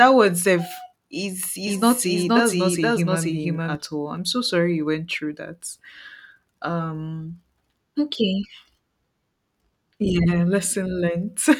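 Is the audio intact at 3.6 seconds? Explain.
No. From 1.67 to 3.75 s, between "word self is" and "all I'm so sorry", a doubled audio track runs: a dry, full-band copy trails about half a second behind at roughly equal level, likely from a second, slower capture path, and cuts in and out abruptly.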